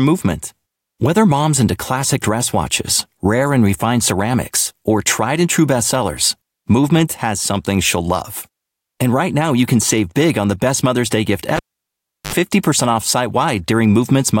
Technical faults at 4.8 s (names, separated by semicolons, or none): none